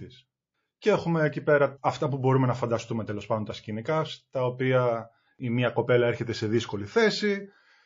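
From start to finish the speech carries plainly audible MP3 compression damage, likely from a low-bitrate encode on the order of 32 kbps. The encoder, starved of bits, has let weak frequency lines flicker on and off between frames, so sibilants turn metallic and the voice has a watery, swirling texture with softened consonant attacks. A simple low-pass filter would dull the top end without that shifting, chirpy instability.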